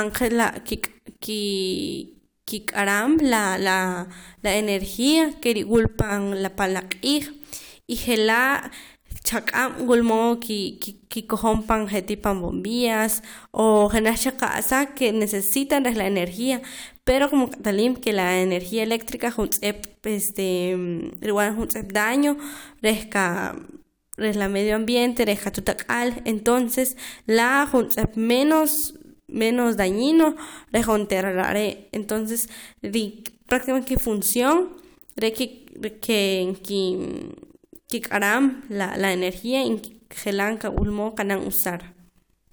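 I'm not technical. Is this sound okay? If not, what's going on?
Yes, nothing in this recording stood out as a problem when I listened to it.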